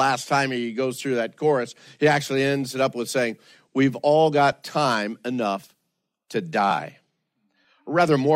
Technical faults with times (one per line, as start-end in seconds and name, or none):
none